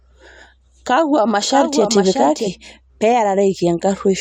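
From 1.49 to 2.51 s the speech carries a doubled audio track, most likely because the same signal reached the mix twice, once directly and once through a slower path or a misaligned edit. The second copy trails the first by around 0.7 s and sits roughly 5 dB lower, full-band and dry, with no decay or room colour. It cuts in and out abruptly at those boundaries, so later speech overlaps audibly with earlier speech.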